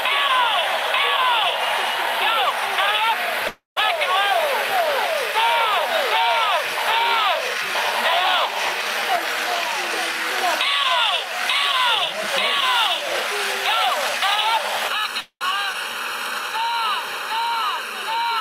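At 3.47 s the audio likely stalls because packets were held up in transit and the jitter buffer ran dry. This is a call audio freeze. The receiver stretches the last sound out for about 290 ms until 3.78 s. It decays into roughly 150 ms of silence, and then the audio resumes exactly where it left off. Nothing is lost, but a 290 ms hole has been pushed into the timeline, and everything after it now arrives that much later.

From 14.88 s to the end, one channel runs behind the other by about 0.7 ms before the two are folded to mono. This is channel delay, heard as comb filtering. Content shared by both channels cancels at evenly spaced frequencies, starting at around 700 Hz. That gives the sound a hollow, phasey colour that stays fixed for the rest of the clip.

Inside that stretch, a second call audio freeze begins at 15.20 s, likely from another hold-up in packet delivery. The tail is drawn out for about 208 ms, to 15.43 s, including roughly 70 ms of silence, and then the audio picks up with nothing missing.

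At 15.73 to 15.76 s comes a skip ahead. Around 200 ms of waiting audio is dropped. Playback jumps straight forward across a join of only 7 ms, so a short piece of the sound simply vanishes.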